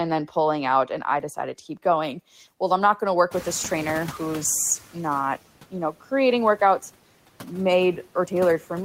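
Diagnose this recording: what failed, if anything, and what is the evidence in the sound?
Background noise sinks between phrases and swells back under the speech. These are noise suppressor artifacts from call processing: the suppressor lowers each band it judges to be steady noise, frame by frame, cutting about 12 dB.

From 2.02 s to 5.05 s the speech turns thin, bright and sibilant, with the top end about 8 dB hotter at 10 kHz than at 1 kHz. This is pre-emphasis left on at playback or decoding: a treble lift following the CD 50/15 µs curve, with no matching de-emphasis applied.

The room noise jumps sharply around three and a half seconds. From 3.31 s to 4.47 s it passes with only about 7 dB of reduction, then sinks. This is the noise suppressor catching up in call processing: its noise estimate lags the rise and needs 1.16 s to adapt.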